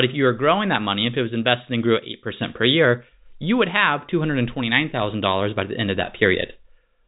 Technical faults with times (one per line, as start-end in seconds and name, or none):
none